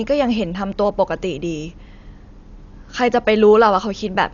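From start to end the speech carries heavy Dolby Digital compression damage: nothing above 7 kHz, and rough, fluttering noise around voiced tones where starved frequency lines are refilled with dither, likely at a bitrate near 48 kbps. A simple low-pass would sound dull but clean.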